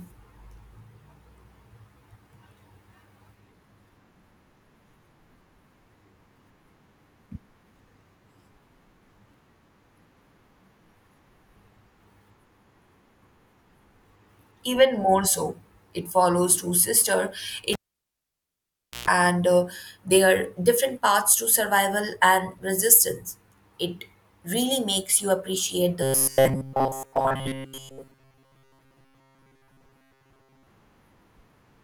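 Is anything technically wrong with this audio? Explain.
Yes, there are three separate faults.

At 17.73 s, right after "two sisters", the cable is pulled and plugged in. A pop starts a gap of about 1.3 s of near silence. A 130 ms burst of 60 Hz mains buzz comes through while only the plug tip is touching. A second pop follows as the signal resumes at 19.08 s with "and uh their different". On a spectrogram the two pops are full-height vertical lines around an almost empty block. The buzz is a short stack of horizontal lines at 60 Hz and its harmonics. The waveform flattens nearly to zero during the gap.

At 25.23 s, between "really makes" and "you appreciate", there is a single sharp click. It is likely caused by dropped samples. A fraction of a millisecond of audio is missing, so the waveform jumps abruptly from one value to a later one. That step is the click. The gap is far too short to remove anything you could hear as missing. 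On a spectrogram it shows as one thin vertical line through all frequencies. Zoomed in on the waveform, it is a visible discontinuity.

From 26.03 s to 30.67 s, just after "really makes you appreciate", the voice turns into a rigid metallic buzz that only roughly follows the speech. This is robotic sound from repeated short buffers, likely because fresh audio isn't arriving often enough. The playback repeats the last short chunk instead, for most of that stretch, and the real audio in between is skipped. The imposed pitch of 134 Hz fits a repeated chunk of about 7.5 ms. A spectrogram shows evenly spaced horizontal harmonics at 134 Hz intervals. The waveform shows short identical cycles repeating.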